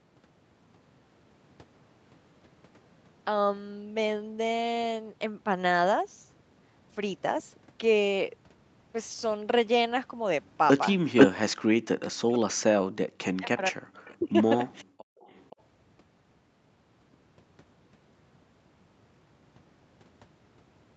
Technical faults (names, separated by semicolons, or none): echo leak; speech suppressed in double talk